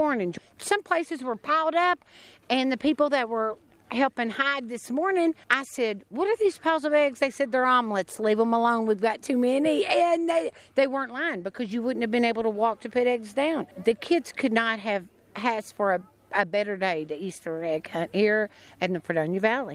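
No technical faults can be heard anywhere in this audio. There is nothing in it that needs a time or a value marked.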